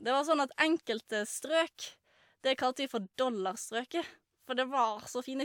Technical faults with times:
none

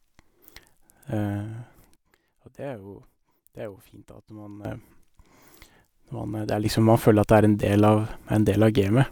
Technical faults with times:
1.96-4.65 sudden gain jump
6.66-9.11 sudden gain jump

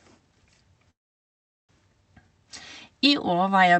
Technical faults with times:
0.90-1.70 call audio freeze

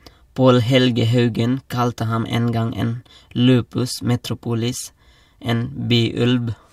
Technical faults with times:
none

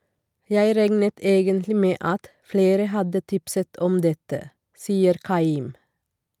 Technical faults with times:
none

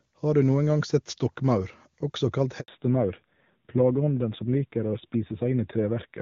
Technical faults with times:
2.60-2.68 handover gap
2.68-6.21 fallback to narrowband

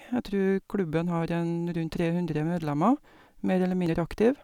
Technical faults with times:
1.91 audio missing between chunks
3.86 audio missing between chunks

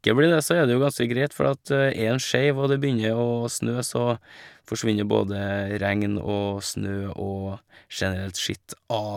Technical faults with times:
none

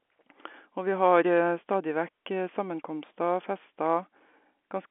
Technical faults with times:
none

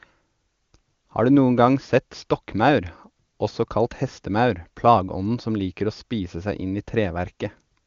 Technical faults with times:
none

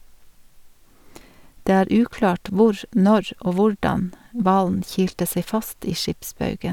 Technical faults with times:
none

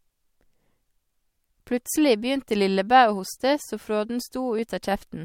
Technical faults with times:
0.64-4.59 clock drift buffer slips

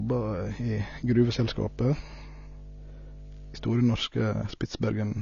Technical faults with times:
0.00-5.21 AAC compression
0.00-3.65 mains hum

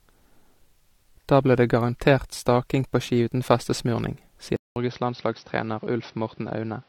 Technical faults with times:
4.56-6.89 input switched to a poorer device

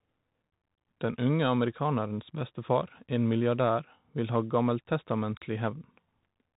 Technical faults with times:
0.00-6.56 Bluetooth CVSD headset codec

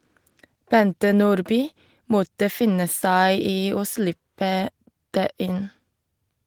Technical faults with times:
none

